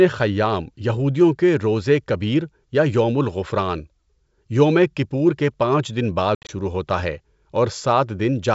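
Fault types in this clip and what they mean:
Packet loss on an ADPCM call: from 6.35 to 6.51 s, between "کے پانچ دن بعد" and "ہوتا ہے", about 110 ms of speech drops out in hard-edged silent gaps, the longest 70 ms. Unlike plain dropouts, the speech resumes with brief, slight distortion while the decoder's predictor resynchronises.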